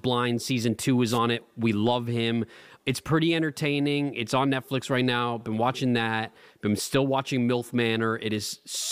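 A brief swish of static from 1.08 to 1.19 s, a wireless microphone noise hit: the FM radio signal faded, letting receiver noise briefly rise.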